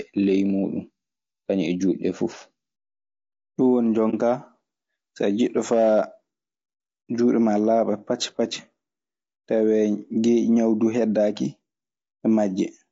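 Low-delay AAC compression runs through the whole speech clip. The voice sounds rough and grainy, with noise filling the gaps between the pitch harmonics and a top band that sounds thin and synthetic. The likely cause is AAC-ELD, the low-delay coder of video calls. Its short frames cannot separate the harmonics cleanly, and they spend bits quickly. The plainly audible damage points to a rate around 32 kbps, which is too little for this coder to hold the voice together.

AAC frame loss with muting occurs from 4.10 to 4.14 s, where the sound drops into a brief dip about 40 ms wide. Coded data went missing, consistent with a single lost frame, and the decoder replaced that frame's spectrum with silence rather than guessing at it. Because neighbouring windows overlap, the signal fades out into the gap and back in afterwards instead of cutting off abruptly.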